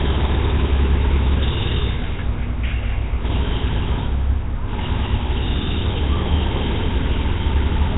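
From start to finish the everyday sound carries heavy damage from what is likely Nellymoser compression, the old Flash codec. Nothing survives above 3.8 kHz, and the quiet bands are replaced by a rough hiss, giving a smeared, underwater haze that fits a low rate near 16 kbps. Unlike a simple low-pass filter, which only dulls the top, this adds grainy noise fill.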